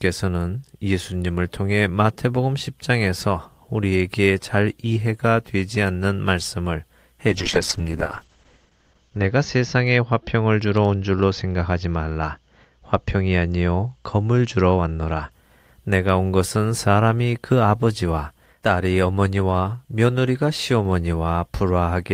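Speech with a call bitrate drop from 7.29 to 15.37 s. The sound turns coarse and watery, and the top end is cut from 20 kHz to 8 kHz, consistent with the encoder falling from 32 to 8 kbps. It is roughest for about 2 s before recovering.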